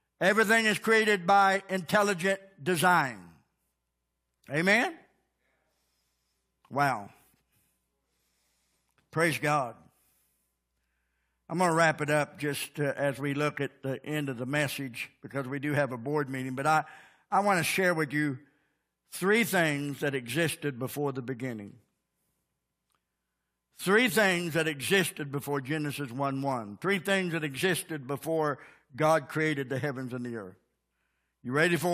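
Speech recording with no technical faults to report.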